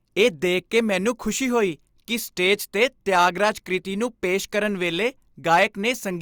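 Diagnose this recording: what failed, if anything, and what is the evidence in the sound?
Hard clipping at the converter. Speech peaks flatten from 2.46 to 3.45 s, about 3 dB over, and 5.52 to 5.63 s, about 5 dB, adding crackly fuzz.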